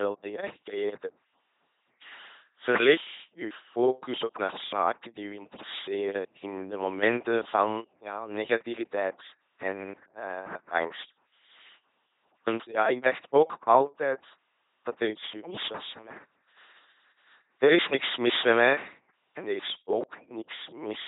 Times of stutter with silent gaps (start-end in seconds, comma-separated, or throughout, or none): none